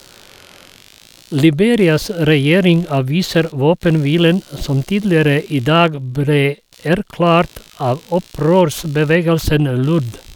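From start to finish the speech carries computer activity noise: a faint buzzing chirp with a pulse rate of around 70 Hz, sitting roughly 30 dB below the speech. Changing load in the machine's processor or graphics is disturbing the ground the audio circuit shares, so the buzz follows the computer's work rather than the talker. On a spectrogram it appears as evenly spaced vertical striations across the full length, and the waveform shows small regular spikes in the pauses.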